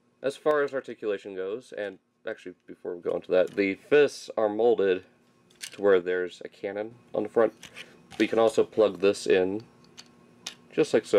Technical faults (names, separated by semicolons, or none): sudden gain jump